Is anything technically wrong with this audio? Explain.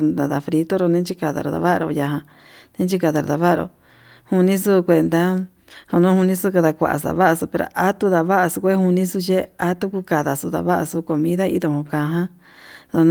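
No, nothing is technically wrong with this audio.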